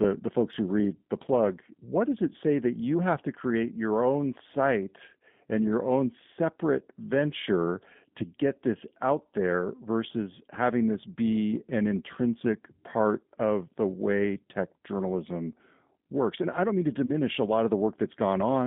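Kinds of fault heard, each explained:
G.729 codec: The whole recording passes through a low-rate speech coder that rebuilds each 10 ms frame from a vocal tract filter, a pitch predictor and a handful of pulses, at 8 kbit/s. The line band runs roughly 150 Hz to 3.7 kHz, so nothing bright survives, and the coding damage is plainly audible as a rough, slightly synthetic texture on every syllable. Unlike simple band-limiting, which only dulls the sound, this adds a constant grainy, artificial quality.
VoIP packet loss concealed by the speech codec: Right after "I don't mean to", at about 17.06 to 17.11 s, the sound briefly smears into a buzzy tone or coloured noise that fades before "a lot" resumes. The loss points to a single 20 ms packet, which the decoder covered by extending its last pitch and filter at falling gain, and the voice stays weak for a short while afterwards. A plain dropout would cut to silence instead of stretching the sound.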